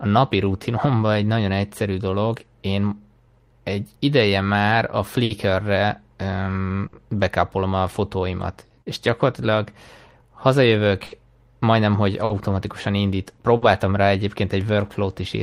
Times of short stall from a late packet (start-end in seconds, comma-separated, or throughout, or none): 5.24-5.32, 6.87-6.95, 11.06-11.13, 12.25-12.32, 13.57-13.64